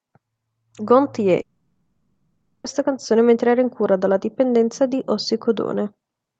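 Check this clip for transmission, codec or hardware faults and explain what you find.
One transmission fault stands out: a long network dropout from 1.41 s to 2.65 s in the speech, about 1.24 s of lost audio. The packets likely stopped arriving, so the receiver's concealment stretched the last received sound into a buzzy, smeared tone that fades away, leaving about 130 ms of silence before the speech resumes mid-stream with the gap's content gone. On a spectrogram, the speech harmonics flatten into smeared horizontal bands that dim, then turn blank. The waveform's envelope tapers to flat. The whole clip, including the concealed stretch, runs through the call codec, with energy ending near 8 kHz.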